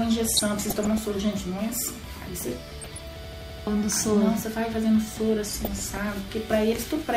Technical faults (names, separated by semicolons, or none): DAB burbling; system hang loop